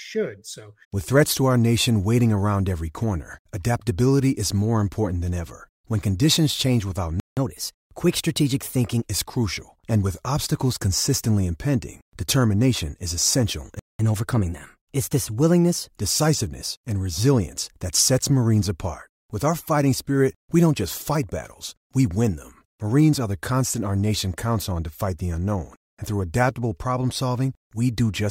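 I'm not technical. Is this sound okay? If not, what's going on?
No. The speech cuts out twice, and after each gap it briefly plays a little fast.

At 7.20 s the sound stops dead for about 170 ms, and at 13.79 s it stops again for about 200 ms. Each time it resumes right where it left off. This is a playback stall: the player most likely ran short of incoming audio, or was held up by something else on the device, so nothing came out until it caught up.

Right after each gap there is catch-up at higher speed. From 7.37 to 9.07 s, and again from 13.99 to 16.0 s, the speech runs at 1.1 times normal speed, and the voice rises by roughly a semitone and a half, a bit like a slightly sped-up tape. The player is racing through the audio that piled up during the pause to get back on schedule. Once it has caught up, speed and pitch return to normal.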